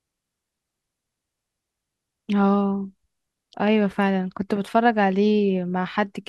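A speech recording, with nothing technically wrong with it.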